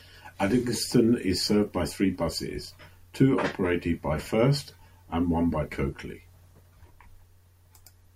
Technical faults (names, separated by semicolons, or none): none